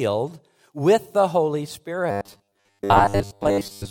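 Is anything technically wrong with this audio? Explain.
Yes. Robotic sound from repeated short buffers runs from 2.11 s to the end of the clip. The likely cause is new audio arriving too seldom, so playback fills the gaps by replaying the last snippet of about 10 ms while fresh speech is skipped, roughly 70 percent of the time. Those repeats impose a fixed 100 Hz buzz, turning the speech into a rigid, metallic drone that only loosely tracks the original.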